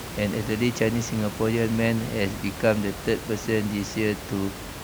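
No system faults are audible in the speech; the only background is room noise about 11 dB below the speech, which belongs to the recording itself.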